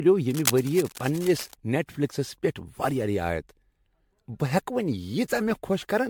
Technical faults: generation loss; cable scratch noise

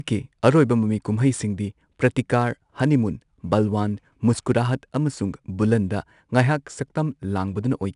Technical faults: 4-bit ADPCM compression

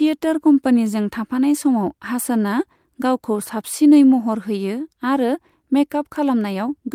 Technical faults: none

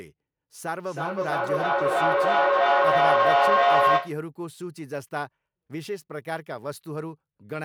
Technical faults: feedback echo between two devices

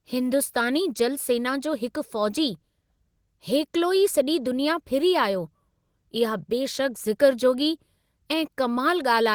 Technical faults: none

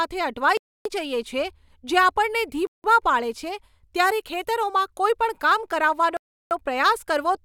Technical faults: block of digital silence

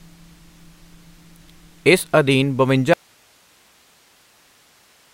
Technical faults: audio dropout to a faint residue

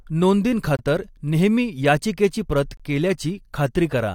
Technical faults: gap between stream segments

